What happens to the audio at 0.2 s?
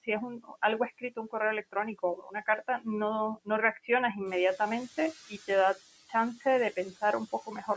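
The noise suppressor mistook the start of the speech for background noise, and between 0.05 and 0.56 s it pulled those frames down along with the background, by about 16 dB at the deepest point. Around a fifth of a second of sound in that span comes out swallowed and faint.

The same suppressor is also cutting the steady noise by about 12 dB frame by frame, so the residue under and around this passage rises and sinks with the speech.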